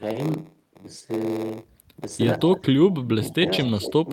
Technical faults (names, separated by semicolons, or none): block size mismatch (padded); speech suppressed in double talk